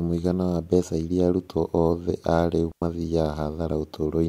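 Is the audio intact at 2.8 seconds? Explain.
No. At 2.8 seconds the speech falls inside a digital wireless dropout that runs from 2.72 to 2.82 seconds. The radio link lost too much data for the receiver to rebuild the signal. So the receiver muted its output for about 102 ms, with a very short fade. The result is a clean hole of near silence in the speech. No burst of noise comes before or after it.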